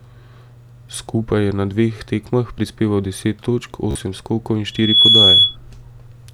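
At 3.91 s, just after "tekmah prispeval deset točk", the speech breaks into a Bluetooth stutter that lasts until 3.96 s. About 43.5 ms of audio never arrived in time, which fits roughly three lost packets. The receiver kept replaying its last short buffer, so a tiny slice repeats as a brief mechanical buzz before the speech jumps ahead. On a waveform this appears as a short run of identical repeating cycles, and a spectrogram shows regularly spaced vertical striations.

From 4.72 s to 5.56 s a loudspeaker feedback squeal takes over. The microphone was picking up the speaker it feeds, and at 3.4 kHz the loop gain went above one, so that frequency fed on itself. It swells over about a third of a second into a piercing whistle about 10 dB louder than the speech. A spectrogram shows a single bright horizontal line at 3.4 kHz, and the waveform's envelope grows into a dense, steady sinusoid.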